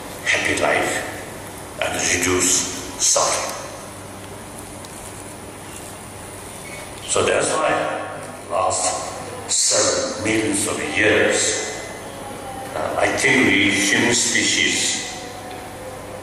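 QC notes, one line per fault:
7.30–8.84 s, channel delay (comb filtering): sound turns rough and slightly doubled as one channel lags around 20 ms, so the mono sum cancels evenly spaced frequencies from about 30 Hz.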